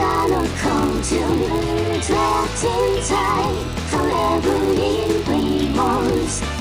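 Throughout the clip, a filter restarted on every block drops its state at each block boundary and begins again from silence, so every block opens with a small transient. These repeat as a buzz at 100 Hz, which fits 10 ms blocks, and rise and fall with the sound's level.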